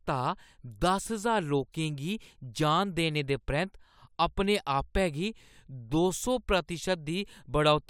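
No technical faults can be heard anywhere in the recording. There is nothing in the speech that calls for a timestamp or a closer look.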